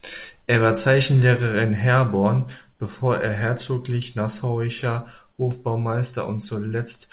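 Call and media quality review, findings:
Comfort noise in place of the background, 2.72 to 2.8 s, 80 ms. Real background drops out, swapped for flat, featureless hiss about 1 dB quieter, roughly 46 dB below the loud parts. Likely cause: sender's DTX pausing transmission, receiver filling the gap with synthetic noise. Band stops at 4 kHz throughout, which fits G.711 on the call path.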